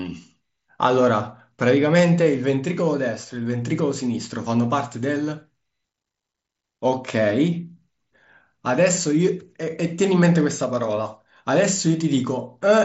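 Nothing faulty is audible anywhere in this speech.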